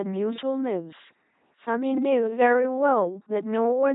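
Throughout the speech, heavy LPC-10 vocoder damage produces a buzzing robotic voice, each moment forced to pulse-train buzz or noisy hiss, at a rate fitting 2.4 kbit/s. A spectrogram shows rigid harmonic stripes alternating with flat noise, and nothing above 3.8 kHz.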